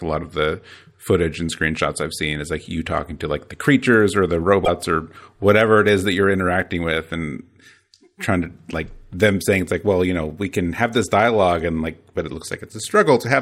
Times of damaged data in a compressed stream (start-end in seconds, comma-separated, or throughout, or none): 4.61-4.68